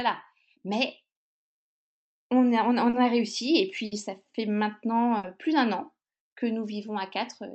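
Speech carried over a call codec whose top end stops near 8 kHz, with three dropouts. At 2.89 to 2.95 s there is short concealed packet loss: about 40 ms never arrived, and the decoder patched it by extending the preceding sound, leaving only a brief smear rather than an audible gap. At 3.85 to 3.93 s and again at 5.17 to 5.25 s, a burst of packet loss removes about 60 ms each time. The fill is longer and fades as it runs, becoming a held buzz or dying hiss, and the speech resumes with a slice of it missing, which sets these apart from the lighter smear at 2.89 s.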